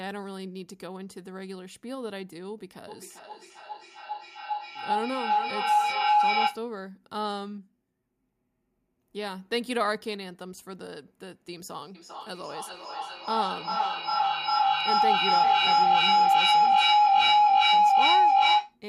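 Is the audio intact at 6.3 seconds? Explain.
No, a feedback howl runs from 2.88 to 6.69 s: a microphone-to-loudspeaker loop gains level each trip, building a tone near 1 kHz, with repeats roughly every 400 ms, about 10 dB above the speech.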